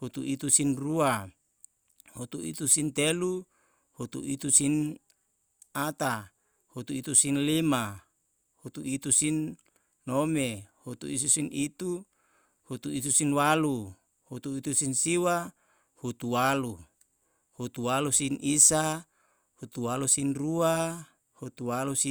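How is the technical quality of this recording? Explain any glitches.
No technical glitches are audible anywhere in this recording.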